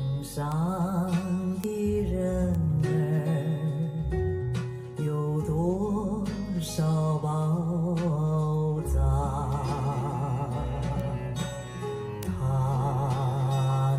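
You'll hear five bit error spikes, at 0.52, 1.64, 2.55, 11.0 and 12.23 s. Each is a single flipped bit that throws one sample, or a couple in a row at 0.52 s, off by a power of two before it snaps right back. They come through as bare, broadband ticks with no relation to the audio. The ones at 1.64 and 12.23 s jump to about -8 dBFS and stand out most. The other three peak around -20 dBFS.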